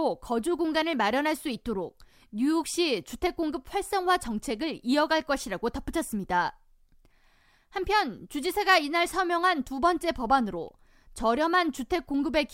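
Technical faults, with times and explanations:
0.93 s and 7.76 s, dropped samples: each is a single sharp click, a thin vertical line across the spectrum, in the speech. The likely cause is a fraction of a millisecond of samples missing, so the waveform jumps abruptly to a later value.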